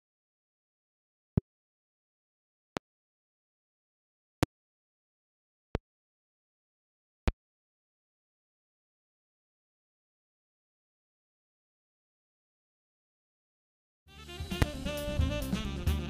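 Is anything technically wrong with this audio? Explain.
Yes. The audio has six loud pops, at 1.38, 2.77, 4.43, 5.75, 7.28 and 14.62 s, each lasting about 30 ms and peaking roughly 20 dB above the signal, or about 25 dB at 4.43 and 14.62 s. Each is a single sharp thump, likely from a voltage pulse such as static or a driver glitch entering the chain. Unlike a dropout or edit click, the sound carries on unbroken underneath.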